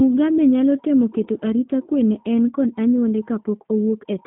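From the first moment to the end, the speech runs through what sounds like the G.729 codec, and the damage is plainly audible. Nothing gets through above 3.5 kHz, and the low end thins out below about 150 Hz, so you're left with a narrow phone-line band. The speech is rebuilt from a vocal tract model plus a pitch predictor and a few pulses per frame, which fits roughly 8 kbit/s. That's why it comes across rough, buzzy and a bit synthetic, though still intelligible.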